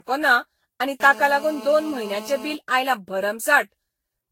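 Generation loss runs through the whole of this speech recording: the sound is swirly, smeared and hollow, attacks are blurred, and nothing survives above 16.6 kHz. The likely cause is around ten successive lossy re-encodes, which fits Vorbis at about 60 kbit/s, each pass requantising on a shifted frame grid so noise and spectral holes accumulate. GSM phone buzz appears from 1.00 to 2.55 s as a hard, raspy 217 Hz buzz rich in harmonics, about 17 dB below the speech and unrelated to it, held steady as during a call, where the audio circuitry rectifies a nearby handset's radio bursts.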